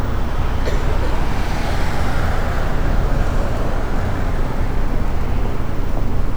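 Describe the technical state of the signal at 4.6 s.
At 4.6 s the signal is intact, with no fault audible in the sound at that moment.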